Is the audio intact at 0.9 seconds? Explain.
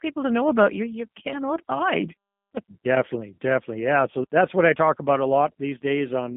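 No. At 0.9 seconds, as throughout the clip, the speech has passed through a G.729 codec, which points to an 8 kbit/s VoIP link. The codec does not store the waveform. It rebuilds each 10 ms frame from a vocal tract filter, a pitch predictor and a few coded pulses, within a line band of 150 Hz to 3.5 kHz. Nothing above 3.6 kHz remains, so the speech sounds narrow and muffled, and the codec damage is plainly audible as a rough, synthetic texture.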